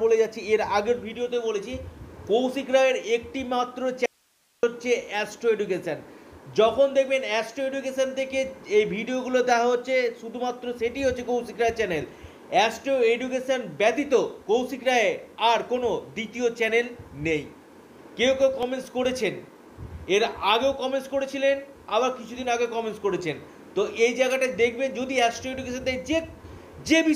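At 4.06 s the sound drops out abruptly and returns at 4.63 s, a gap of about 0.57 s. This is an audio dropout to a faint residue: the signal vanishes, but the gap holds steady hiss sitting roughly 40 dB below the normal level. The chain after the break was likely still live while the source was briefly lost. A true digital mute or a pause would fall to silence, and a fade would taper, but this cuts hard both ways.

From 18.2 s to 19.9 s there are nine short ticks, each lasting only a few milliseconds. These are CD scratch ticks: once per disc revolution, a blemish corrupts more data than error correction can rebuild, so the player patches or mutes those samples. The ticks come at about five per second, regular as a rotation. Random clicks or vinyl crackle would be irregular in timing, and a skip would jump or repeat the audio rather than tick.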